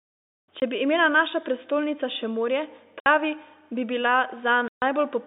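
Three abrupt holes cut the speech: 0.60–0.62 s before "bi imela naša prestolnica", 3.00–3.06 s after "naša prestolnica še morje", and 4.68–4.82 s after "bi bila". This is packet loss filled with silence. The 20, 60 and 140 ms gaps fit whole 20 ms packets going missing on the band-limited G.711 telephone line.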